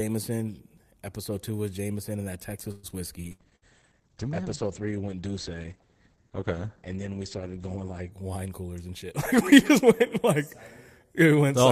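A speech recording with call-transmission faults. At 2.71 to 2.86 s the sound stalls into a short fading buzz or hiss of about 120 ms and then carries on with nothing lost, likely a call audio freeze, where delayed packets left the jitter buffer empty and the receiver stretched the last sound until delivery resumed. From 3.25 to 8.18 s the speech turns muffled and rough. This is a call bitrate drop from 40 to 10 kbps, held at the lowest rate for about 4.8 s, with the coded bandwidth narrowing from 20 kHz to 8 kHz as the encoder was starved of bits. Inside that stretch, at 3.32 to 3.41 s and 3.56 to 3.65 s, the sound briefly becomes a held, dwindling buzz or hiss and then jumps ahead. Each is a burst of packet loss: roughly 60 ms of audio never arrived, the receiver extended and faded the last sound, and playback resumed past the missing part. From 8.51 to 10.40 s the speech runs slightly hurried at unchanged pitch. 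This is a jitter buffer speed-up at 105 percent, with the receiver trimming about a tenth of a second of pitch periods to shrink excess buffered delay.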